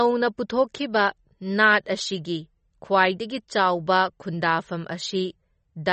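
Throughout, the speech is dull, with nothing above 8.3 kHz, and sounds watery and swirly. This is likely MP3 compression at a low bitrate, around 32 kbps.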